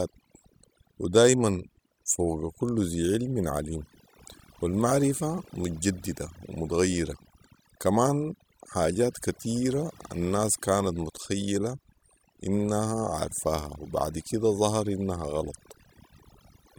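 Overdone noise removal runs throughout the speech. A noise reduction stage set far too strong cuts individual frequency bands whenever they sit close to its noise estimate, taking quieter speech detail with them. The background drops and breaks up into twinkling specks.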